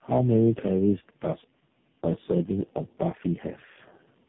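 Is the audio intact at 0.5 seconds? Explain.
No. Tandem speech coding runs through the whole clip, including 0.5 s. The sound fits three speech codecs in a row, likely ending in AMR-NB, each re-coding the last one's damaged output. The result is rough, warbly speech with nothing above 3.8 kHz.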